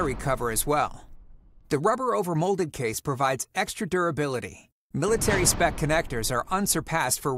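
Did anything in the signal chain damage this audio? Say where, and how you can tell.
No, nothing stood out on listening that would point to damage at any stage of the chain.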